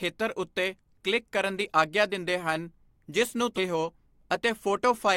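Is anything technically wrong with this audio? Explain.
Yes. A stream segment skipped at 3.57 to 3.60 s: the speech jumps abruptly forward with a brief blip, likely because one stream segment failed to load and playback resumed at the next.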